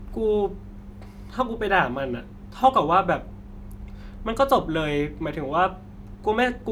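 No faults are audible anywhere in the speech recording.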